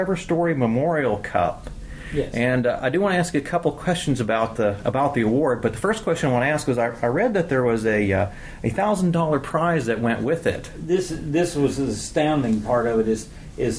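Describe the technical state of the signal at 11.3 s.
At 11.3 s the signal is intact, with no audible technical fault at that point.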